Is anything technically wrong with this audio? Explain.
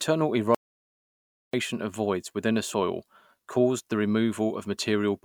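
Yes. From 0.55 to 1.53 s the speech drops out to dead silence for about 990 ms, with no room tone at all, then picks up mid-flow at "of voids within a". That's an audio dropout to silence, likely a lost input or stray mute while the recorder kept writing zeros.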